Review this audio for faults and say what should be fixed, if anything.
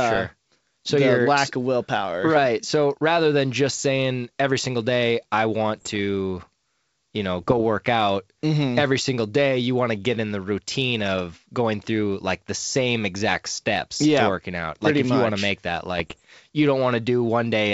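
Bit errors on an ADPCM link occur in three bursts of roughly 0.23 s each: 5.76–5.99 s after "every single day I", 7.39–7.61 s after "you know", and 15.98–16.21 s after "want to make that". Each burst sounds like pops and rough crackle with brief level jumps. Flipped bits corrupt the decoder's step size and predictor, so each error rings on for a few milliseconds instead of staying a single click. The density fits an error rate of a few tenths of a percent. The G.722 wideband coding on this link retains its normal 7 kHz bandwidth. To prevent these errors, improve the radio or transmission margin and add error protection, or use error concealment on the ADPCM link.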